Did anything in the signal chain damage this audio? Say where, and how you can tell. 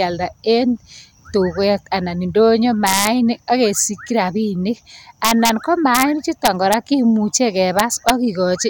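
Yes. Integer overflow in a fixed-point gain or sample-format stage causes sharp cracks at 2.87–3.07 s (after "tuket anan indonyo"), 5.25–5.49 s (after "akesikyii rabinik"), 5.95–6.03 s, 6.45–6.74 s and 7.79–8.10 s. Peaks about 1 to 3 dB over full scale wrap to the opposite sign instead of being limited.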